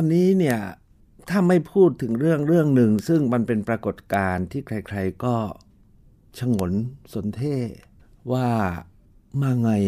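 Four bit error spikes puncture the speech, at 0.51 s, 2.99 s, 4.14 s and 6.59 s, each a single sharp tick unrelated to the talking around it. A flipped bit briefly pushes one or two sample values up by a power of two before they snap back, reaching about -1 dBFS at 0.51 s, about -13 dBFS at 2.99 s and about -7 dBFS at the last two. The waveform shows isolated vertical needles, and the spectrogram shows thin full-height lines.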